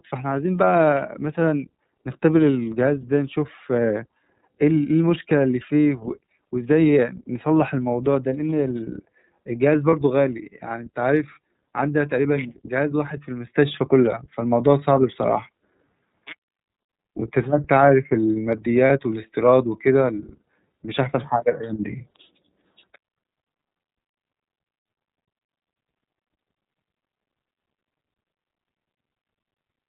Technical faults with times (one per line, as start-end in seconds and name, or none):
0.00-29.88 iLBC codec
9.90-9.94 lost iLBC frames
18.87-18.90 lost iLBC frames